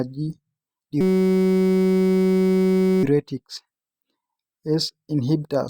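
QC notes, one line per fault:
1.01–3.04 s, system hang loop: the playback system froze while the audio hardware kept replaying one tiny ring buffer, about 5.33 ms long, which fits a 256-sample buffer. That slice repeats hundreds of times, so the speech becomes a steady 188 Hz buzz for about two seconds.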